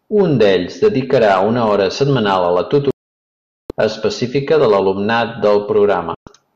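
At 2.91 to 3.71 s and again at 6.15 to 6.27 s the speech falls into a digital broadcast dropout. The receiver muted on lost or corrupt frames, so about 0.8 s, then 0.12 s, vanish. Both gaps show as a flat waveform and blank spectrogram columns.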